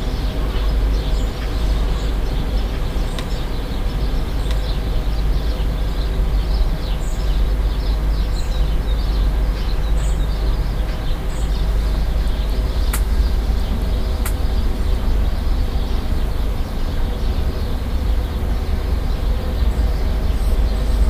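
Throughout, a doubled audio track: a quieter copy trails about a second and a half behind. It was likely captured again by a slower path.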